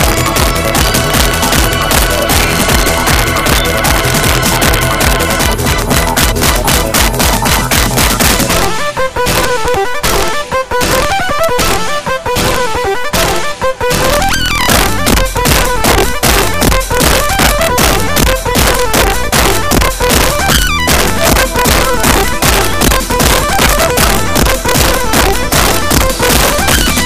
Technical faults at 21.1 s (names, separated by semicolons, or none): integer overflow